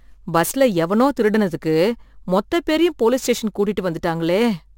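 Throughout the speech there is imaging from sample-and-hold upsampling. Each sample was simply repeated, which fits a 24 kHz to 44.1 kHz conversion. Mirror copies fill 12 to 24 kHz, about 24 dB down. They sound like a metallic fizz tracking the speech.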